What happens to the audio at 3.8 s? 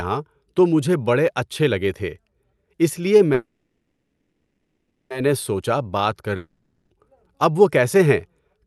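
Right after "اِس لیے" there's a call audio freeze from 3.33 to 5.12 s, likely packets stalling and draining the jitter buffer. The last sound is stretched out as a fading buzz, then resumes where it left off, with nothing lost.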